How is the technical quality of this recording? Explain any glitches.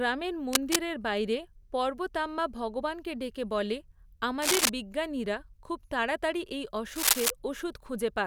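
Three short bursts of cable scratch noise mar the speech. They fall at 0.53 to 0.76 s, 4.42 to 4.69 s and 6.95 to 7.31 s. Each burst is a dense, ragged rustle of noise sitting roughly 5 dB above the speech. The likely cause is a worn cable, connector or control being moved, so its contact resistance flickers rapidly and injects uneven noise. The result is a brief scratching sound laid over the recording, lasting about a quarter to a third of a second each time.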